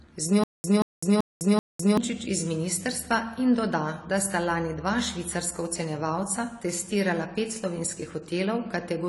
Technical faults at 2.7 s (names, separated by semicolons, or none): AAC compression